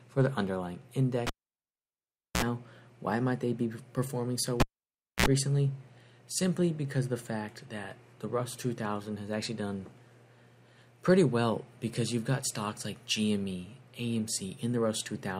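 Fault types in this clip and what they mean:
Cable pulled and plugged in: a pop, then near silence for 1.11 s from 1.27 s and 0.61 s from 4.60 s, a brief 60 Hz mains buzz, then another pop. A live lead was pulled out and reinserted, and its tip caught hum before seating.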